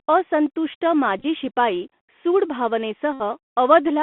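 Bluetooth CVSD headset codec, throughout the speech: the sound is held to a telephone band of about 200 Hz to 3.5 kHz. The one-bit delta coding, which fits a 64 kbps link, adds plainly audible granular hiss and scratchy s sounds, and loud high content distorts where it outruns the adapting step.

Bluetooth headset packet repeated, at 1.19 to 1.26 s and 3.13 to 3.22 s: lost packets are filled by decoding the previous packet again. The first gap scatters 37.5 ms of repeats, runs no longer than about 15 ms, as short buzzy ticks. The second loses 71.2 ms, about 19 packets, and repeating every 3.75 ms it buzzes steadily near 267 Hz.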